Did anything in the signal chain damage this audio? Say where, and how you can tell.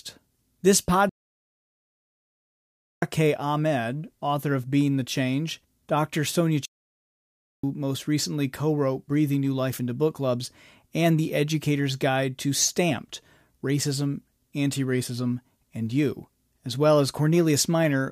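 Yes, at the playback stage: the player likely ran out of data or had its thread blocked, producing two playback stalls. The speech drops to silence from 1.09 to 3.02 s, nearly 2 s, and from 6.65 to 7.64 s, about 1 s, resuming at "most recently co wrote".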